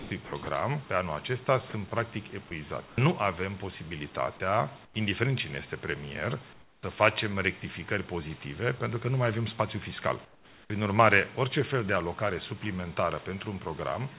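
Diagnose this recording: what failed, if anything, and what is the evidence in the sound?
From 0 to 0.47 s the sound is choppy, with about 200 ms flickering to synthetic fill. This is likely sound chopped by the voice detector in call processing.

At 2.48 to 2.51 s a 30 ms stretch gives way to steady noise. This is likely sound dropped by the voice detector, with comfort noise filling the gap.

Featureless hiss replaces the real background at 2.87–2.96, 4.85–4.94, 6.53–6.83 and 10.25–10.7 s, about 5 to 11 dB quieter. This is likely comfort noise in place of the background during discontinuous transmission.

At 10.68 to 10.70 s the sound starts abruptly, missing 20 ms of its beginning. This is likely an onset clipped by the voice detector reacting late. The audio stops at 4 kHz throughout, which fits a G.711 mu-law call codec.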